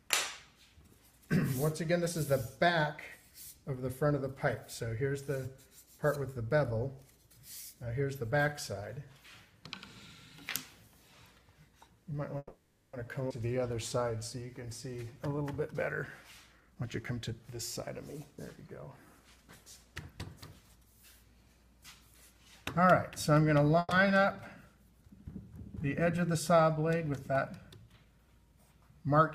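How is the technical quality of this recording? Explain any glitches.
The recording has several network-timing glitches clustered between 12 and 29 seconds: two freezes, one skip, one slowed stretch and two hurried stretches.

The first call audio freeze runs from 12.37 to 12.95 s. The receiver stretches the last sound into a fading buzz or hiss for about 560 ms, ending in roughly 40 ms of silence, before the audio resumes exactly where it stopped. A shorter one at 23.79 to 23.93 s fills about 120 ms, with about 20 ms of silence. The likely cause is packets stalling in transit and the jitter buffer running dry. Nothing is lost, only delayed. That is what separates a freeze from a skip.

The skip ahead at 13.29 s is the opposite case. Only about 10 ms of filler covers a jump that discards around a fifth of a second of sound, so the two sides butt together almost seamlessly. Audio vanishes and no pause is inserted. 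Coming right after the freeze, this fits the buffer discarding excess once late packets flood in.

A jitter buffer slow-down follows from 13.47 to 15.44 s. Playback drops to 92% speed as the receiver repeats single pitch periods and bits of pauses to rebuild its reserve, adding about 167 ms in total. The pitch stays put while sounds drag out. A drop in pitch would instead point to an ordinary tape-style speed error.

Two jitter buffer speed-ups do the reverse. From 16.54 to 20.77 s the audio runs at 110% and sheds roughly half a second. From 27.05 to 28.53 s it runs at 108% and trims about 150 ms. The receiver is removing tiny slices of one or a few pitch periods to cut an oversized delay. The result sounds hurried but not higher in pitch, which distinguishes it from a sped-up playback.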